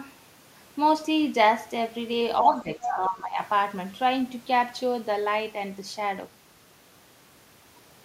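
From 2.41 to 3.39 s, the speech is suppressed in double talk. The level sinks by about 10 dB for roughly a second. Both ends were talking at once. The echo canceller likely mistook the local talker for echo and turned everything down.

Inside that dip, from 2.82 to 2.86 s, the other side's voice leaks through. It is a brief scrap, about 10 dB below the speech. The likely cause is the echo canceller failing to remove all of the loudspeaker sound from the microphone.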